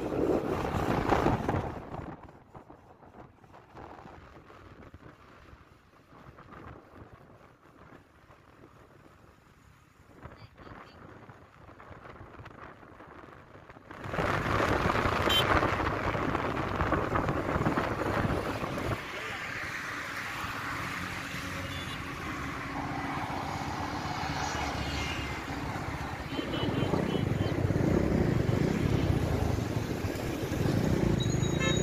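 No technical faults can be heard anywhere in the audio.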